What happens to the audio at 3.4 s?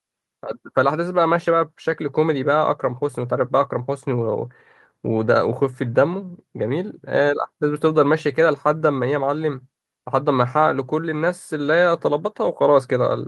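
Nothing goes wrong at 3.4 s; the speech carries on intact through that moment with no audible fault.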